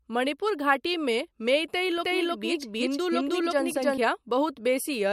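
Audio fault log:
1.98–3.98 s doubled audio track: a dry, equally loud second copy of the speech trails by roughly 300 ms, starting and stopping abruptly, likely a duplicated capture path, unlike a decaying echo.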